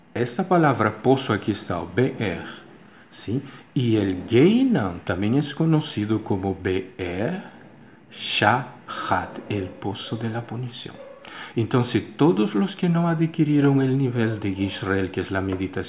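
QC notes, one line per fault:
No faults found; nothing to log.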